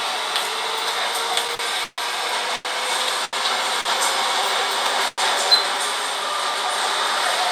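From 1.47 to 3.87 s the sound drags and stutters through six brief holds, the longest 137 ms. These repeated stalls (stutter) come from late packets emptying the jitter buffer, with the last sound stretched to fill about 408 ms.

At 5.08 to 5.20 s a short call audio freeze briefly sustains the sound, then drops to silence for 20 ms. This was likely caused by a 100 ms delay in the packets.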